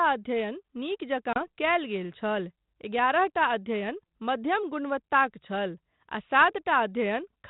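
Speech carried over G.726 ADPCM at 32 kbit/s, with light coding noise and a spectrogram that stops at 4 kHz. The one fault is packet loss on an ADPCM call at 1.33 to 1.38 s. A few packets, 30 ms of audio, drop out as a hard-edged silent gap. That gap shows as a flat line on the waveform and a clean vertical blank on the spectrogram. The decoder's adaptive predictor and step size lose step with the sender's, so the speech comes back with some distortion, settling within some tens of milliseconds.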